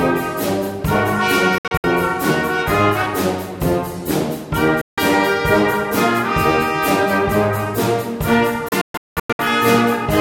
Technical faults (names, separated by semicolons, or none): digital broadcast dropout